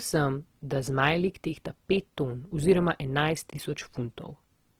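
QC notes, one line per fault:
Throughout, Opus compression: the speech sounds grainy and rough, with a noisy sheen on voiced sounds, though the top end still reaches about 20.2 kHz. That's likely Opus in music mode filling starved bands with folded or noise content, which fits a low rate around 16 kbps.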